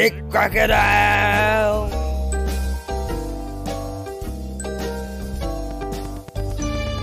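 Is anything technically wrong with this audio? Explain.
Yes. From 5.71 to 6.99 s there is a train of clicks: around ten sharp, similar ticks at a steady rate of about 8.6 per second, each popping out noticeably above the sound and audible even where the sound is quiet. Regular, similarly shaped pulses like these point to something outside the audio itself, likely electrical interference from nearby equipment or a faulty connection or power supply, stamping the same impulse into the signal at a fixed interval.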